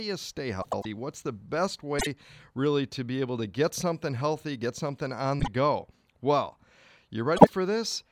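Speech with frames out of order at 0.62, 1.99 (after "the best"), 5.40 (after "healthy get something on") and 7.36 s. Adjacent 24 to 96 ms blocks play swapped, giving garbled flutter, with spectrogram breaks at the joins.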